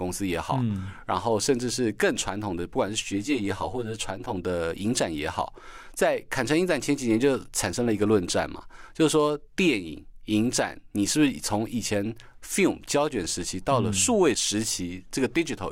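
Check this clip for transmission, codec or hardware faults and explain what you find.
There is one fault. From 3.04 to 4.37 s there is channel delay (comb filtering). One channel lags about 10 ms, and summing to mono cuts notches from around 50 Hz, leaving the speech hollow and phasey.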